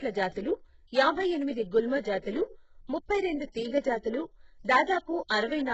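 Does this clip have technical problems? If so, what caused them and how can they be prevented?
Yes. The speech carries heavy HE-AAC compression artefacts throughout, likely from coding at a very low bitrate, around 8 kbps. Its treble is rebuilt rather than recorded, so s sounds turn gritty and metallic, and nothing reaches above 8 kHz. A plain low-pass filter would leave a dull top end instead. Encoding at a higher bitrate, or with a codec that codes the full band, prevents this.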